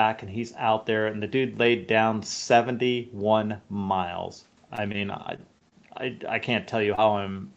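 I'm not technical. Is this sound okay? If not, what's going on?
No. From 4.75 to 5.73 seconds there is repeated packet loss, which gives a robotic sound. Over that second, small pieces of the speech failed to arrive in time, seven times in a row. Each gap is short, the longest under three hundredths of a second. The receiver covered each one by stretching the last bit of sound. Because the gaps come so close together, the speech turns choppy, with pieces missing.

Near the end there are three moments of short concealed packet loss: at 6.95 to 6.99 seconds, at 7.33 to 7.36 seconds, and at 7.48 to 7.52 seconds. Each time, a few hundredths of a second of speech went missing. The receiver filled the hole with a guess based on the sound just before it. You may hear a tiny smear or wobble, and a quick consonant can disappear.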